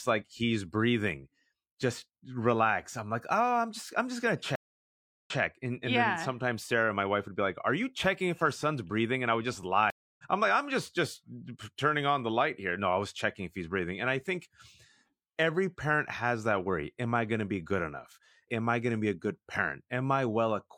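Speech with two stream reconnects: after "just I'm just gonna" at 4.55 s, a 0.70 s silence gives way to sound resuming 0.14 s earlier, while after "I would just" at 9.90 s, 0.28 s of silence skips about 0.3 s ahead. Unlike a dropout, the restarted decoder doesn't pick up where playback stopped.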